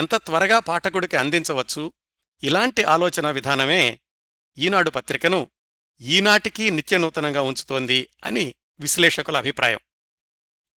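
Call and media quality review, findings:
Opus voice compression throughout: speech hoarse, slightly robotic; hybrid SILK/CELT starved, which fits 16 kbps. Spectrogram: patchy, smeared band above 8 kHz, blockiness consistent with 20 ms frames.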